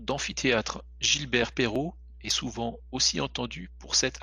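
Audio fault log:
Throughout: mains hum. A steady low tone at 60 Hz sits under the speech, roughly 20 dB below it, from power-line interference getting into the signal. On a spectrogram it shows as an unbroken horizontal line at 60 Hz with some low harmonics above, present even in pauses.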